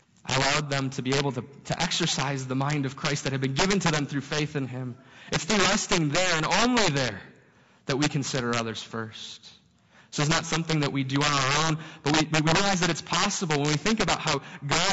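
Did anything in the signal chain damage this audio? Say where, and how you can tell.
Yes. Integer overflow occurred in a gain or sample-format conversion stage: the signal was driven about 12 dB past full scale and the arithmetic wrapped instead of saturating. A couple of percent of samples exceed the limit and flip to the opposite extreme. Throughout the clip, every loud speech peak turns into a violent crack, harsher and more abrupt than clipping, because the waveform jumps across the whole range instead of flattening.

The codec stage adds a second fault, likely low-delay AAC compression (AAC-ELD) at a bitrate that sounds around 32 kbps. Its short frames resolve the harmonics of the speech poorly, and the damage is plainly audible across the clip. The voice sounds rough and grainy, with noise filling the gaps between harmonics and a thin, synthetic quality in the upper band where the encoder could not spend enough bits.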